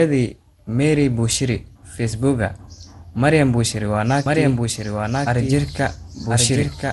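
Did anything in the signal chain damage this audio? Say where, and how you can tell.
Yes. The damage is in the codec stage, and it runs through the whole clip. The speech sounds swirly, hollow and smeared, and consonant attacks blur. Nothing is present above 11.9 kHz. This is generation loss. The likely cause is repeated lossy coding, perhaps around ten passes of MP2 at about 96 kbit/s. Each pass quantises on a shifted frame grid, so the noise and spectral holes stack up.

A doubled audio track enters abruptly at 4.26 s and runs to the end. A full-band second copy trails the original by about one second, at about 5 dB lower. It has no decay tail and no room colour, so it is not reverb. The likely cause is a second, slower capture path or an edit that mixed in a delayed duplicate.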